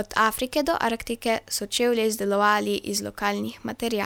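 No technical faults can be heard anywhere in the speech.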